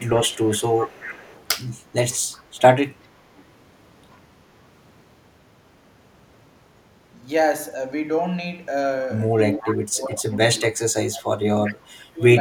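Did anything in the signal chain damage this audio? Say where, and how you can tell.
Yes. Echo leak at 0.00–1.45, 2.32–2.61, 3.03–3.07, 3.36–3.44 and 9.60–9.76 s in call processing: a copy trailing by 374 ms, about 10–40 dB down, likely from an incompletely cancelled loudspeaker path.

Speech suppressed in double talk at 9.60–10.30, 11.05–11.28 and 11.55–12.22 s, also in call processing: dips of about 20–25 dB, likely the echo canceller muting overlapping talk.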